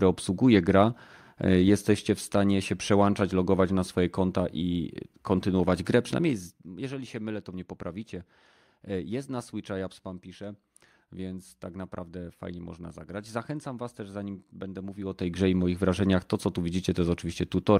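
At 6.17 to 6.74 s, after "kontynuować grę", and 14.96 to 15.40 s, before "i moich wrażeniach to", zipper noise: a 15 dB drop, then rise, applied in unsmoothed steps of under 1 dB, then about 1 dB, at roughly 50 per second, each step clicking into a buzzy ticking under the speech.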